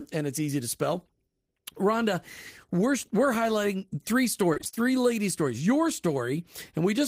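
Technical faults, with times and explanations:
4.53–4.78 s, repeated packet loss (robotic sound): right after "we're we're highlighting three", the audio turns choppy and robotic. A rapid run of short dropouts, each up to 24 ms, gets patched by stretching the previous sound, so nearly half that stretch is filler.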